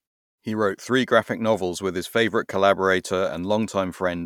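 No technical faults can be heard in this speech.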